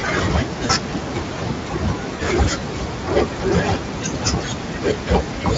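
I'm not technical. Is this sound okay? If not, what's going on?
No. At 0.65 and 2.15 s, VoIP packet loss concealed by the speech codec: bits of speech got lost, and the decoder papered over each gap with a brief buzzy or noisy, fading smear.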